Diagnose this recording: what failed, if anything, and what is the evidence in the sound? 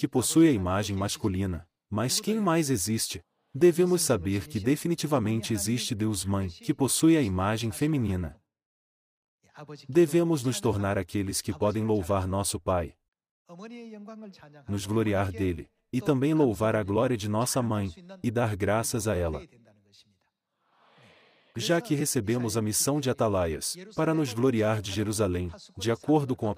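Nothing stood out on listening that would point to a failure at any stage of the chain.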